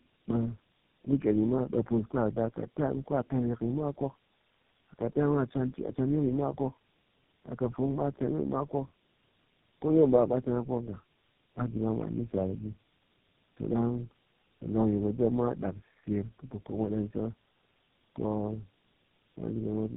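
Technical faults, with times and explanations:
Throughout: tandem speech coding. The speech passed through three low-rate speech coders in series, consistent with AMR-NB, then G.729A, then GSM full rate, joined by G.711 links. Each coder models its input with a simplified vocal-tract and excitation description and discards what that model misses, so every stage compounds the previous one's errors. The result is rough, muffled, warbling speech, band-limited with nothing above about 3.8 kHz.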